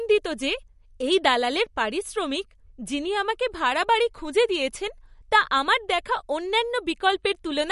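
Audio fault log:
Throughout, MP3 compression: Nothing is heard above 11.2 kHz, so the top of the sound is sharply cut off. Sibilants lose their crispness and turn metallic. The audio has a watery, swirling texture. Weak frequency components flicker on and off between frames. Consonant attacks smear instead of landing cleanly. The damage is plainly audible. The likely cause is a low-bitrate MP3 encode, which fits a bitrate around 48 kbps.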